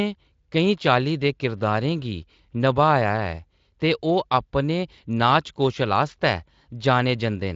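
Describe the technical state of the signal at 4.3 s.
At 4.3 s the speech is intact, with no fault at that moment; the Speex coding it passes through leaves only light traces there, and the band stops near 7.6 kHz.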